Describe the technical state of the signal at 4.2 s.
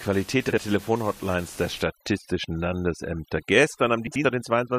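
At 4.2 s, overdone noise removal, running from 1.82 s to the end, is breaking the background into twinkling specks where the room noise, about 21 dB below the speech, has been cut too hard. Unlike steady codec band-limiting, the lost bands flicker on and off.

Inside that span, frames out of order affect 4.07 to 4.25 s. Two neighbouring blocks of about 85 ms, which fits four frames each, play swapped, giving a garbled flutter. Unlike a dropout, no time is lost.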